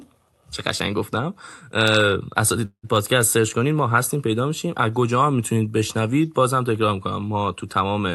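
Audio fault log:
2.65–2.85 s, call audio freeze: the sound stalls into a fading buzz, then about 80 ms of silence, and resumes 180 ms late with nothing missing, likely a jitter buffer running dry. The spectrogram shows smeared, decaying bands before a blank gap, and the waveform tapers to a flat line.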